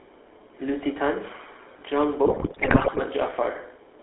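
From start to finish the speech passes through the GSM full-rate codec. The coder models the vocal tract and excites it with a sparse, regularly spaced pulse train, discarding most of the excitation detail, and its sound fits the 13 kbps full-rate scheme. The line band runs from about 300 Hz to 3.5 kHz, so the sound is thin and boxed-in, and the coarse excitation gives the voice a plainly audible buzzy, gravelly roughness.

From 2.26 to 3.01 s, GSM bit errors corrupt the decoder's input. Flipped bits land in the filter, pitch and gain parameters across a long unbroken run of frames, which points to an error rate of roughly 5 percent. The spectral envelope bends wildly and the level jumps from frame to frame, so for those three quarters of a second the voice breaks up into squawks, pops and wet gargling.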